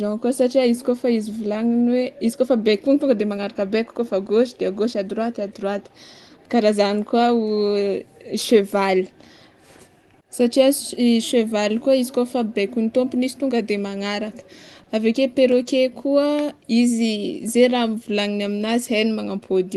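Throughout the recording there is clock drift between sender and receiver. The sender's clock runs about 2% slow relative to the receiver, so the jitter buffer keeps draining and the playback has to stretch to keep up. On a waveform nothing dramatic shows. The cumulative effect appears only as speech that ends up slightly later than it should, with small irregular seams scattered through the file.

From 0.20 s to 13.96 s, repeated timing corrections keep the receiver in step. Playback runs at 98% speed, with short pieces repeated at uneven intervals, adding roughly a third of a second in total. It sounds like a faintly dragging, unsteady tempo with occasional tiny hiccups. On a spectrogram the harmonics look very slightly elongated, and brief duplicated fragments appear at the splice points.

At 14.83 s to 14.88 s there is a short stall from a late packet. The buffer ran empty, and the receiver held the last sound for 30 ms until the packet arrived, then carried on with nothing lost. 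The playout delay grew by 30 ms. It is heard as a sound briefly frozen, with a slight buzz or dip. A spectrogram shows a flat, smeared band of held harmonics, and the waveform shows a short stretch of repeated, near-periodic cycles.

From 15.77 s to 19.60 s the repeated timing corrections resume at the same 98% speed, adding roughly a tenth of a second, with the same faint drag and scattered hiccups. Across the whole clip the Opus call path's band limit is visible as an empty spectrogram above 12 kHz.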